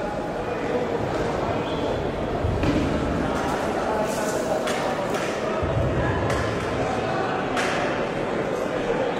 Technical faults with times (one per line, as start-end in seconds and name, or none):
5.49-9.20 adaptive stream at a lower bitrate